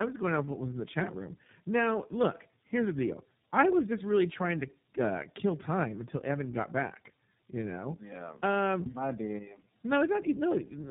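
All the way through, the speech shows tandem speech coding: it was squeezed by AMR-NB at 7.4 kbit/s, passed through G.711, then re-coded by iLBC at 15.2 kbit/s. Stacking two speech coders like that leaves it rough, muffled and warbly, with nothing above 3.7 kHz.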